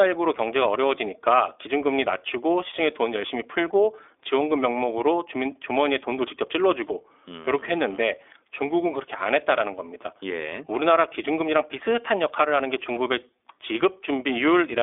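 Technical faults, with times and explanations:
Throughout, iLBC codec: the speech sounds thin, boxed-in and slightly buzzy, with a rough, synthetic edge on every syllable. There is no air or sibilant sparkle, because nothing reaches above about 3.8 kHz, and the low end is rolled off below 300 Hz. iLBC codes the excitation of each 20 ms frame on its own, without leaning on the frame before, so the waveform is rebuilt coarsely frame by frame. The plainly audible roughness fits its 15.2 kbps mode.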